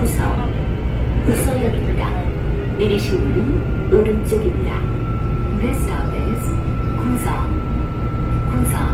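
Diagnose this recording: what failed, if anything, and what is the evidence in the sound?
The codec stage is the likely fault: Opus compression throughout. Tones sound rough and grainy, with noise filling the bands where detail should be, and the damage is plainly audible. Content still reaches about 20.2 kHz, which fits CELT music mode at roughly 16 kbps.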